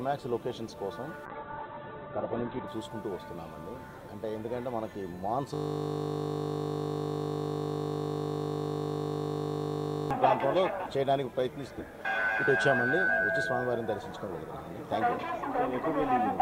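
The audio has two faults. From 1.26 s to 2.75 s a call bitrate drop makes it muffled and rough: the top end collapses from 20 kHz to 4 kHz and the coding turns coarse. That fits the encoder being pushed from around 128 kbps to about 7 kbps after its bandwidth estimate fell. From 5.54 s to 10.11 s a system hang loop produces a steady 50 Hz buzz as one 20 ms stretch of audio repeats exactly, because the output hardware kept cycling one buffer while the system froze.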